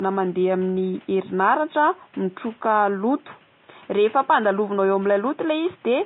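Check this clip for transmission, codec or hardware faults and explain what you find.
One codec fault runs through the whole clip. Vorbis compression is present throughout the speech, likely at a bitrate near 21 kbps: the treble is quantised so coarsely that its detail turns to grainy hiss, and consonant onsets are blurred. The room noise sits about 33 dB below the speech.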